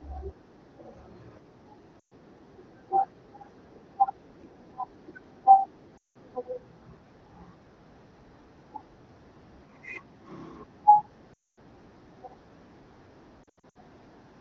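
Brief smeared dropouts that fade toward silence occur at 1.99–2.13, 5.97–6.17 and 11.33–11.59 s, with scattered short warbles from 13.43 to 13.77 s. These are lost AMR speech frames. The wideband decoder stretched the last good pitch and vocal tract settings at falling gain until good frames returned.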